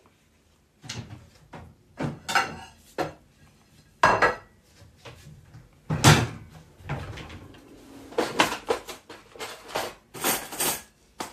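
No technical faults can be heard anywhere in this recording; the signal stays intact and continuous throughout.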